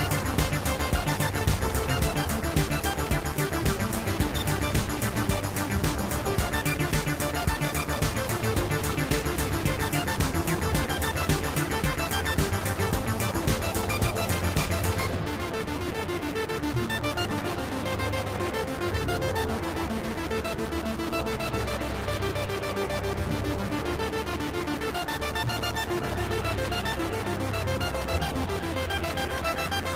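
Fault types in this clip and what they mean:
No technical faults can be heard anywhere in this audio, which holds steady and intact throughout.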